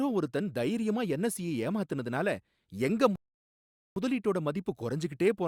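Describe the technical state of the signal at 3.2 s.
At 3.2 s the speech is halted by a rebuffering stall. It runs from 3.16 s to 3.96 s. The player has used up all the audio it had downloaded. Playback stops and waits for more data to arrive. What you hear is a sudden drop to silence, lasting about 0.81 s. Then the speech picks up at exactly the point where it broke off. Nothing is skipped. The pause simply adds 0.81 s to the clip.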